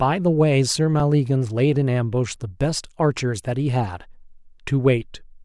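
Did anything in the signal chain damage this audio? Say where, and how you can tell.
Yes. At 1.00 s there is an underrun with held sample at the driver or buffer stage. The output buffer ran dry for about 2 ms. The converter held its last value, so the waveform goes flat. About 2 ms of live audio was lost.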